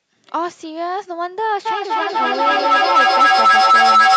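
From 1.66 s to the end there's a feedback howl. A mic-to-speaker loop keeps gaining, building to a whistle around 1.5 kHz. The loop repeats roughly every 300 ms and the howl peaks about 11 dB above the speech.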